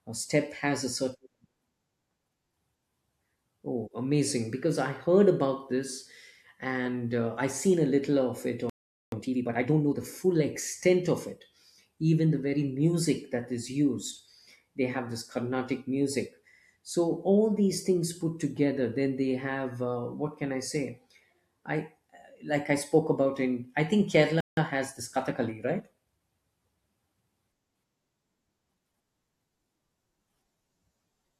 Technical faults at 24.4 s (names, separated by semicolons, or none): playback stall